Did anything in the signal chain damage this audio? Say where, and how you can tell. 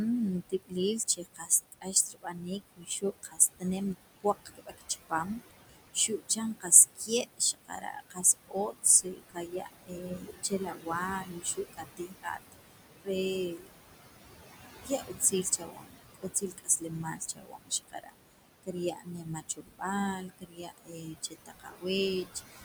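Yes. The damage comes from call processing, where a frame-by-frame noise suppressor is cutting the background by about 19 dB throughout. The room noise, which sits about 10 dB below the speech, dips hard in the pauses and swells back under each phrase. On a spectrogram the noise floor blanks out between phrases. On the waveform the gaps look nearly flat.

The same suppressor also causes speech cut by the noise suppressor, mistaking quieter parts of the speech for noise. Soft consonants and word endings sound swallowed at 0.49–3.64 s, 3.95–10.9 s, 11.21–13.09 s, 13.51–13.68 s, 14.83–19.83 s, 20.18–21.85 s and 22.24–22.63 s, with drops of about 14 to 22 dB and around ten seconds affected overall. A spectrogram shows the weak high-frequency energy at word edges chopped away, and the waveform shows syllable tails clipped short.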